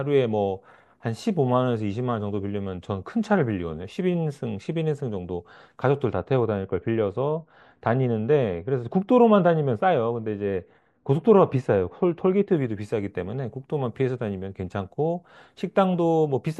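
A treble-cut stage meant to undo pre-emphasis acts where it has no matching boost to cancel: de-emphasis applied wrongly, from 6.13 s to 12.57 s. The response slopes smoothly down, about 13 dB lower at 10 kHz than at 1 kHz, so the speech turns dull and muffled.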